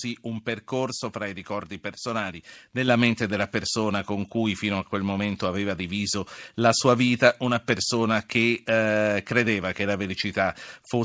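At 2.88 s the call software raised the microphone's input volume in one step, so speech and background jump together by about 5 dB, heard through a call codec with nothing above 8 kHz.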